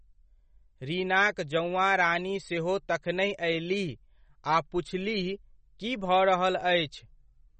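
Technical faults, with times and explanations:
Throughout, MP3 compression: nothing is present above about 8.3 kHz, and the speech has a plainly audible watery, swirling texture with chirpy s sounds and smeared onsets. This is likely a low-bitrate MP3 encode, around 33 kbps, dropping treble and flickering weak spectral lines frame to frame.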